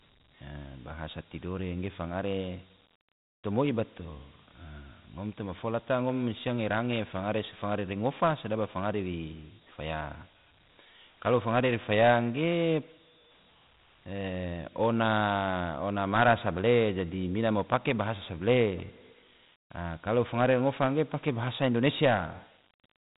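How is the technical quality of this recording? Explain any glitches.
The recording's technical quality is held back by one fault that runs throughout. Dialogic VOX ADPCM stores each sample as a coarse 4-bit step, which fits a 32 kbps stream. This leaves a gritty hiss following the speech. A spectrogram shows energy cut off flat near 4 kHz, with a grainy noise floor beneath each word.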